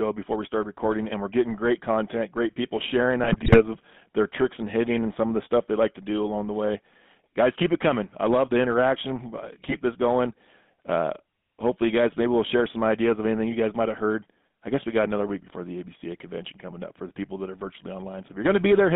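GSM full-rate codec coding runs through the whole clip: the speech is squeezed into a 150 Hz to 3.5 kHz band and rebuilt from a vocal-tract model driven by sparse regular pulses, which fits a 13 kbps full-rate stream. It gives plainly audible buzzy, gravelly roughness.

GSM bit errors strike from 3.24 to 3.62 s, after "content great people sharing" and before "of their tricks and", and again from 9.62 to 9.76 s, between "I love the interaction" and "this going". Corrupted filter, pitch and gain values, suggesting a few percent of bits flipped, warp frames into squawks, pops and gargling.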